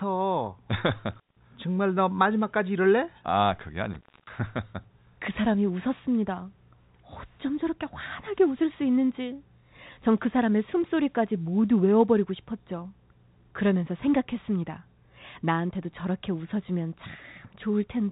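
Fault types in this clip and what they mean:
Intermittent contact: a loose plug or cable briefly losing its connection. Here the sound drops out twice, at 1.13 s for about 170 ms and at 3.93 s for about 260 ms, with crackle at each edge and faint hiss in the gaps.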